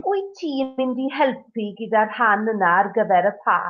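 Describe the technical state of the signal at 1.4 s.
At 1.4 s the speech signal is intact, with no audible technical fault at that point.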